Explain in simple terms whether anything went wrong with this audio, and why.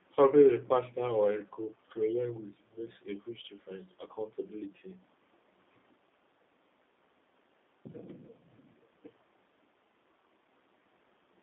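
Something did go wrong. From start to finish the speech has passed through a G.729 codec, the compact phone-call format that rebuilds each voice from a simple model of the throat plus a few pulses instead of sending the real sound. That is why it sounds slightly rough and synthetic. A plain narrow phone line would only sound thin, with everything kept between about 250 Hz and 3.7 kHz. This adds a buzzy, artificial texture on top of that thinness.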